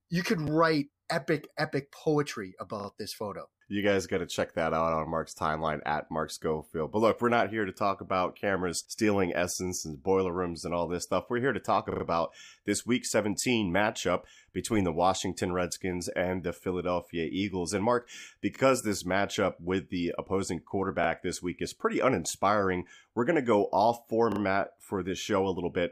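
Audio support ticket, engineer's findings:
Repeated buffer, speech stutters at 2.8, 11.92, 18.56, 21.04 and 24.32 s, the worst after "here to talk". Same 40 ms chunk replays 1 to 3 times with hard joins. Playback device likely starved, looping its last buffer.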